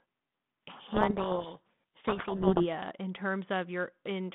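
Speech over a narrowband line, 150 Hz to 3.6 kHz, sounding like G.726 at about 32 kbit/s. From 0.7 to 2.65 s there's a codec payload misread: the decoder is reading the G.726 code words with their bits in the wrong order, so the speech gets buried under harsh, grinding distortion until the packing lines up again.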